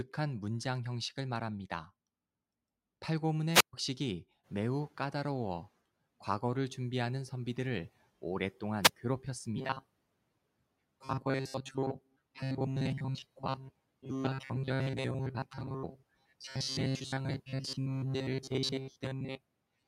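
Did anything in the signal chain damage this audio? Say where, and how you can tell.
Yes, two stages left marks. The first is call processing, in the noise suppressor. Around 4.5 s the room noise jumps by about 15 dB, and from 4.43 to 5.69 s it passes through with less reduction than it later gets. Over those 1.26 s the noise sinks by about 8 dB as the suppressor's noise estimate catches up. That gradual fade, rather than a clean step, is the noise suppressor catching up.

The second is at the driver or buffer stage. From 9.56 s to the end of the clip the speech becomes a rigid, metallic buzz at a fixed 133 Hz that still roughly tracks the speech. A constant pitch like that indicates robotic sound from repeated short buffers, likely caused by a starved audio path replaying the last short block, about 7.5 ms, which fits a 133 Hz buzz. Most of the real audio is being skipped.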